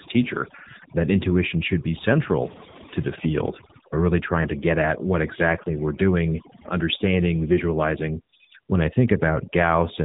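Right from the start and running the whole way through, you can hear overdone noise removal. The denoiser was pushed too hard, so any frequency band sitting close to what it judged to be noise got pulled way down or switched off entirely. That took the quieter bits of the speech along with the hiss, which is why the gaps drop to near silence with little twinkling specks.

Layered on top for the full clip is the AMR narrowband mobile codec, the old 2G/3G phone speech coder. It rebuilds the voice from a vocal-tract model fed by a handful of pulses per short subframe, and here the damage is plainly audible: buzzy, synthetic-sounding speech, which points to one of the lower AMR-NB modes, somewhere around 8 kbps. The top end is gone too, with nothing above about 3.8 kHz.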